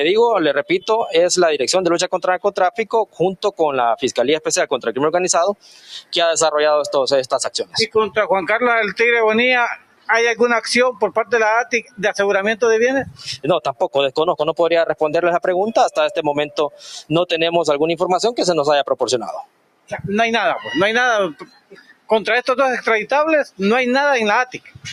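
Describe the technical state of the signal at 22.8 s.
At 22.8 s the signal is still under the noise suppressor applied to music or sounds, which runs through the whole clip. A suppressor built for speech treats sustained tones, ambience and decay as noise. It ducks them by something like 15 dB, then lets level back in when a new attack arrives. So onsets come through fairly intact. The held parts and tails sink away. The result pumps and flutters, and the sound turns thin.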